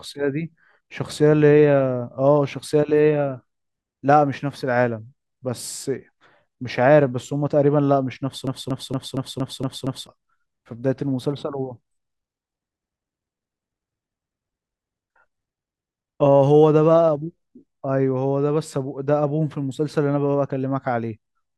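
From 8.47 to 10.07 s the speech sticks in a broken-record loop: a 0.23 s fragment repeats seven times, likely a stalled player, showing as identical stripes on a spectrogram.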